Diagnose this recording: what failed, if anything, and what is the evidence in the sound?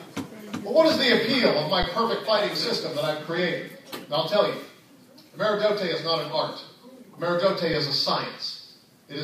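Underrun with held sample in the playback buffer. The waveform holds flat at 1.83 s and 7.74 s. Sound then resumes softly where it stopped.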